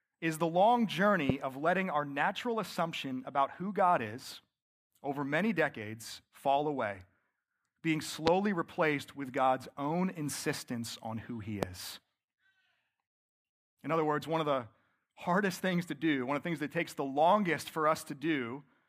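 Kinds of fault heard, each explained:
Loud pop: a sudden voltage spike, likely from a plug, switch, static or driver glitch, enters the signal. It is heard three times, near 1.3, 8.27 and 11.63 s, as a single sharp pop roughly 15 to 20 dB above the speech, which carries on beneath.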